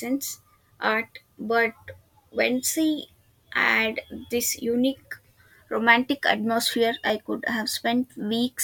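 At 7.10 s, just after "this unique romantic atmosphere", there is an overlap between stream segments. Two consecutive segments, which appear to be about 6 s long, carry timestamps that overlap, and the player trims the apparent duplicate. That material was never actually repeated, so roughly 15 ms of real audio is dropped. The waveform jumps discontinuously at the join, producing a tiny skip in the speech.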